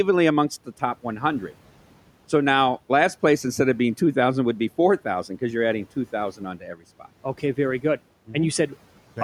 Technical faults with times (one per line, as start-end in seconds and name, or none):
6.57-6.82 speech cut by the noise suppressor